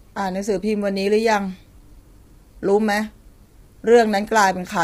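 Throughout, the speech sounds grainy, with noise between harmonics. This is heavy low-delay AAC compression, likely AAC-ELD near 24 kbps.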